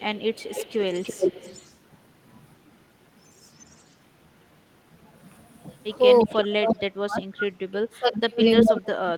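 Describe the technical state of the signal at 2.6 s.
At 2.6 s the speech signal is intact, with no dropout, distortion, glitch or other fault audible.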